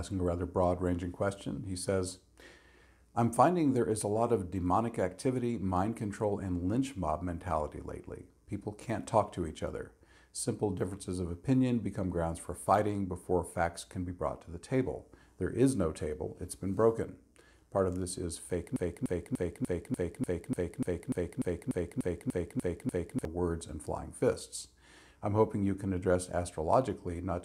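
A broken-record loop takes over the audio from 18.76 s to 23.25 s: one fragment of about 295 ms repeats exactly, back to back, 15 times. This is likely a stalled player or stream resending its last buffer. On a waveform or spectrogram, identical blocks tile evenly across that span.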